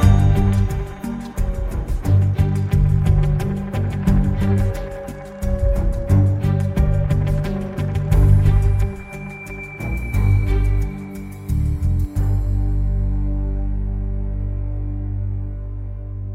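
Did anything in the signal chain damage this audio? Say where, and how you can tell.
No, nothing stood out on listening that would point to damage at any stage of the signal chain.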